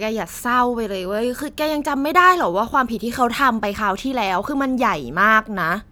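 No technical faults detected.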